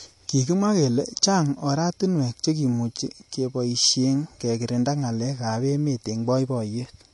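From start to finish the speech stops dead at about 11.2 kHz, with nothing above it, so sibilants sound dull and the top end feels capped. On a spectrogram this shows as a hard horizontal ceiling across the whole clip, with empty black above that line; the waveform itself looks unremarkable. The likely cause is low-bitrate audio saved at a high bitrate: an earlier MP3 encode, which fits something near 48 kbit/s, removed that band, and re-saving as high-bitrate MP3 could not restore it.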